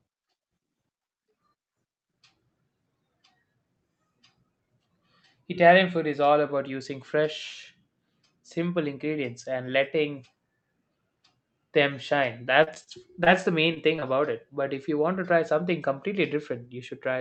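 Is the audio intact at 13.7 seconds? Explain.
No. At 13.74–13.78 s the speech briefly smears: short concealed packet loss, 20 ms missing, filled by the decoder extending the previous sound.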